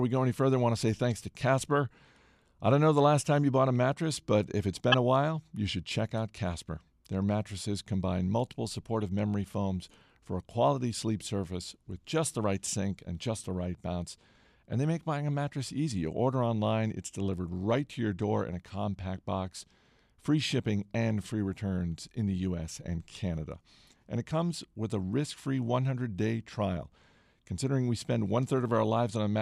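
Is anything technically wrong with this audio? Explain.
Yes. At 4.92 to 4.94 s a corrupt frame was decoded. Flipped bits in a couple of compressed frames misplaced energy in frequency, causing a brief, fairly loud chirp, squeak, blip or burst of noise in the speech.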